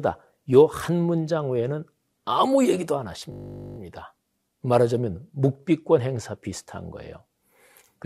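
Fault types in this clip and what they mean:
System hang loop: a frozen computer or driver made the hardware replay one 20 ms buffer 23 times, a 50 Hz buzz; identical repeating waveform cycles, spectrogram shows stacked 50 Hz harmonics.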